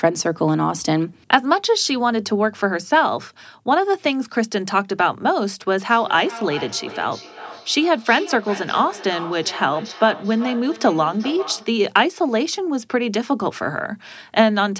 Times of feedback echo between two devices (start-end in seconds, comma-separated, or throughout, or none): 5.89-11.84